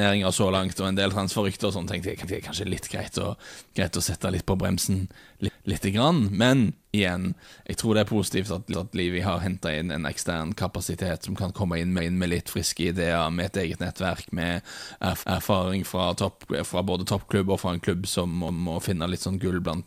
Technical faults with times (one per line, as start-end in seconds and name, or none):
2.23-2.48 overlapping chunks
5.48-5.73 overlapping chunks
8.73-8.98 overlapping chunks
15.23-15.48 overlapping chunks
18.48-18.73 overlapping chunks